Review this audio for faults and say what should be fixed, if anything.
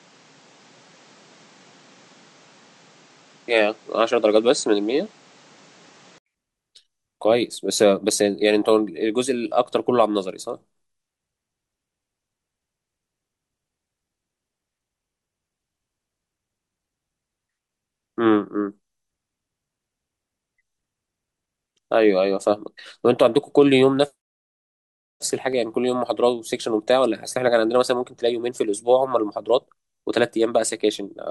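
The input most likely switched to a poorer device for the opening stretch, from 0.00 to 6.26 s, before the recording moved to the better path. On that device the speech carries nothing above 8.8 kHz, so it sounds duller and boxier, with a different background noise sitting roughly 35 dB below the signal. At 6.26 s there is an 80 ms silence at the switch, and the tone then clears with no noticeable jump in level. To prevent this, lock the recording to the intended microphone and stop the system from reassigning the input or changing a headset's profile once capture has started.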